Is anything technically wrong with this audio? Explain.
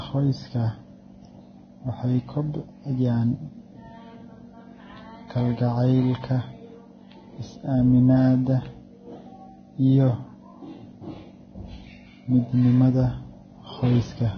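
Yes. Throughout the speech, the treble is missing above about 6.5 kHz, and what remains in the upper band is hissy and grainy, with a rough texture on sustained sounds and smeared consonant onsets. The damage is heavy and points to a low bitrate, around 19 kbps, so the likely cause is Vorbis compression. At that rate the encoder cuts the top band and quantises the high-frequency residue so coarsely that real detail is replaced by noise-like filler of similar energy.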